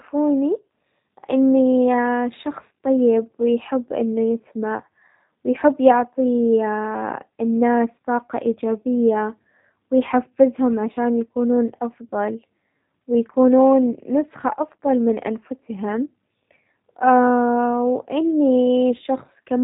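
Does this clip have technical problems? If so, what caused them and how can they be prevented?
Yes, the whole clip carries G.729 codec damage. The speech is rebuilt from a vocal tract filter, a pitch predictor and a few pulses per 10 ms frame, so it sounds rough and slightly synthetic, which fits the 8 kbit/s G.729A variant. A spectrogram shows a hard ceiling at 3.8 kHz with nothing above it. Prevent it by recording or transmitting with a wideband codec such as Opus.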